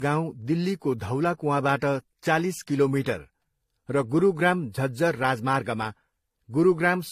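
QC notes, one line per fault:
Throughout: transcoding between lossy codecs. Two artefact signatures overlap, with a smeared, synthetic high band alongside a second layer of coding grain, and nothing above 14.9 kHz. This likely fits a 24 kbit/s HE-AAC encode re-encoded as 48 kbit/s AAC-LC. A single codec would show only one signature.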